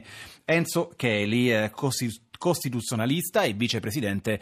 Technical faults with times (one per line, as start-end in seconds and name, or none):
none